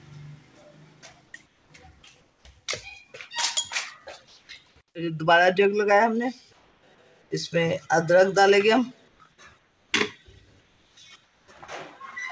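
Comfort noise in place of the background fills six pauses, at 1.46–1.70, 2.21–2.45, 4.28–4.49, 6.53–7.31, 9.08–9.92 and 10.61–11.48 s. The real background becomes steady, textureless hiss, a smooth, uniform patch on a spectrogram, likely synthetic noise generated during discontinuous transmission.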